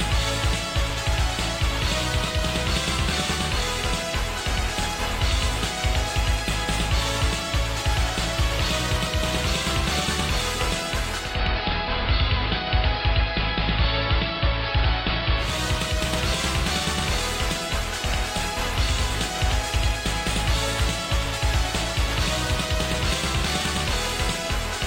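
From 11.15 to 15.62 s, digital radio blending to analogue: a 266 ms cross-fade to the AM broadcast shifts level by about 1 dB and brings up hiss well below the signal. The rising hiss marks analogue fallback rather than a codec bandwidth drop.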